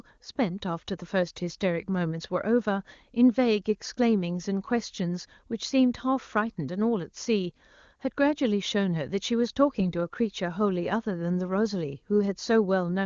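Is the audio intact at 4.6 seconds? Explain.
Yes, the audio is intact at 4.6 seconds, with nothing at that moment beyond the AMR wideband (HD Voice) codec running at 23.85 kbit/s, which leaves the sound band-limited to about 7.2 kHz.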